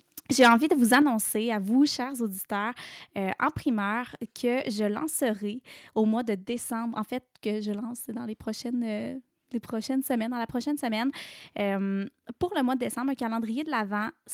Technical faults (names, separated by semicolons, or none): microphone overload; microphone volume stepped down